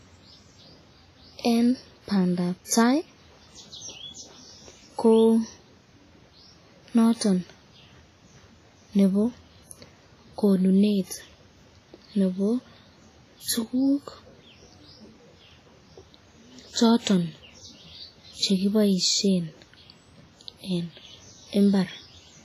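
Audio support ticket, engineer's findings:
WMA compression, whole clip: heavy codec damage on the speech, with ringing, washy texture and hiss that swells and fades with the signal. Nothing above 15.4 kHz. Likely a transform encoder with long blocks at a low bitrate, fitting roughly 24 kbps, smearing quantisation noise and zeroing weak components.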